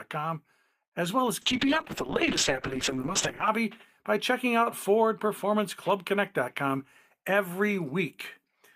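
Speech with a call bitrate drop from 1.43 to 3.55 s: audio turns muffled and watery, consistent with falling to roughly 6 kbps; spectrogram shows high frequencies abruptly missing.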